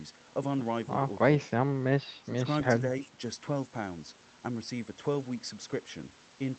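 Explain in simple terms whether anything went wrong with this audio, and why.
Speech suppressed in double talk at 2.21 to 2.44 s and again at 2.81 to 3.21 s: the voice briefly sinks, sharply the first time. Likely both ends spoke at once, and the echo canceller, unable to separate voice from echo, turned everything down.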